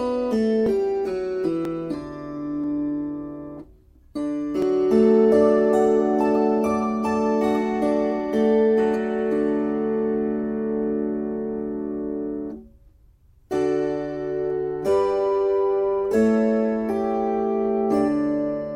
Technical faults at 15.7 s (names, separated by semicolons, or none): none